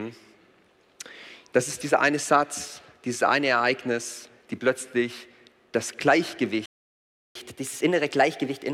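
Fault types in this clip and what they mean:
Playback stall: The player likely ran short of data or had its thread held up, so its output simply stopped. The sound breaks off in mid-flow at 6.66 s and stays silent for about 0.69 s before resuming at 7.35 s.
Catch-up at higher speed: After resuming, the player resampled its backlog to play it faster and win back the lost time. From 7.35 s to the end, the sound runs at 1.1 times normal speed and sits roughly a semitone and a half higher in pitch.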